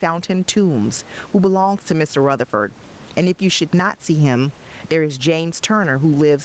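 Throughout the speech, the level pumps, swinging by something around 15 dB, while loud and quiet passages sit squashed close together in level. This is gain pumping, likely caused by the input gain being set far too high for the microphone, so a fast limiter clamps down on every peak and then lets go.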